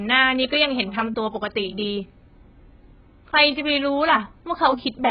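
Throughout the speech, the encoder was likely running AAC compression at a very low bitrate, with heavy damage that fits AAC-LC at around 12 kbps. Nothing survives above 5 kHz, so the speech sounds dull and muffled, with sibilants smeared into a warbling, fizzy texture.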